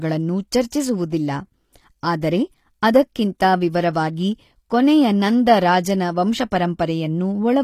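HE-AAC compression throughout, likely at a low bitrate near 24 kbps: treble rebuilt from copied lower bands makes s sounds gritty, with nothing above 14.9 kHz. Pre-echo at 0.70 s: coding noise spread across the block leaks into the quiet moment before an attack, adding an 18 ms hiss and a smeared onset.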